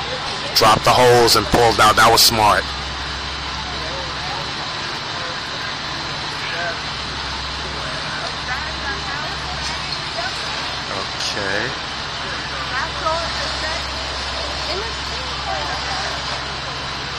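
Nothing stood out on listening to the audio.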